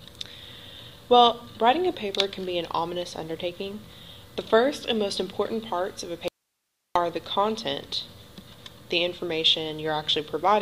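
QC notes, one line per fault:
6.28–6.96 s, audio dropout to a faint residue: abrupt 0.67 s loss leaving only hiss about 55 dB down, likely an upstream break; waveform near-flat, spectrogram a faint even haze.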